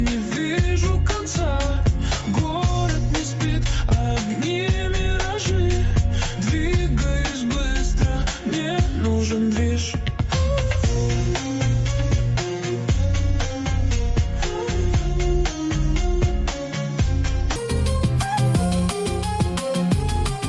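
At 17.56 s the sound jumps in speed and pitch together, and it stays that way to the end at 20.48 s. This is a wrong sample rate fault. The samples are being clocked out faster than they were captured, with no conversion in between. Everything runs 1.5 times too fast and sits 7 semitones higher. That ratio fits 16 kHz material played back at 24 kHz. The result sounds hurried and high-pitched.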